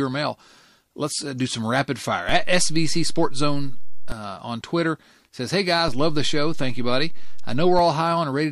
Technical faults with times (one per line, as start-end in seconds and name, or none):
2.29-4.12 DC step
5.88-7.79 DC step